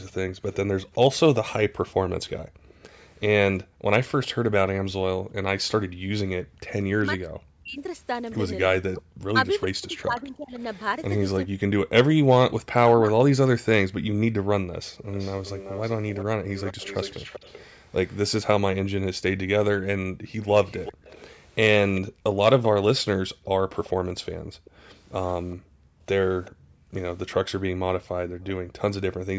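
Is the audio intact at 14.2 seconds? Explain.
Yes, the speech at 14.2 seconds is intact, with no fault at that moment; the call microphone processing is working normally there, and its bandwidth stops at 8 kHz.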